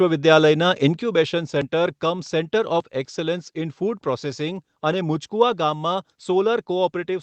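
At 1.02 s the speech and background drop together by about 5 dB in one step, likely a microphone volume stepped down; the waveform envelope narrows abruptly, and the spectrogram dims evenly below its 8 kHz ceiling.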